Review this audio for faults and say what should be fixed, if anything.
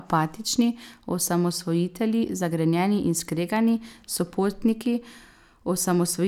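No faults were found; nothing needs fixing.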